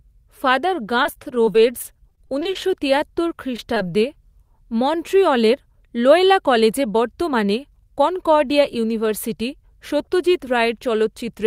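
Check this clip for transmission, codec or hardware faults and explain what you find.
There are three kinds of transmission fault here, all in the first four seconds of this speech clip.

From 1.03 to 2.57 s there is repeated packet loss, with a robotic sound. Fourteen short gaps, none longer than about 23 ms, drop out in quick succession. Each one is bridged by extending the last sound, so about 15% of the stretch is concealed audio. The result is choppy, with fragments missing.

From 1.56 to 3.19 s, overlapping that, a jitter buffer slow-down stretches the audio. The receiver repeats pitch periods and pause fragments to rebuild its reserve, adding about 84 ms. Playback runs at 95% speed at unchanged pitch, so sounds are drawn out.

At 3.57 and 3.75 s there are two instances of short concealed packet loss. Each loses about 20 ms, which is patched by continuing the preceding sound and blending back in. 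Each is heard as a brief smear or wobble.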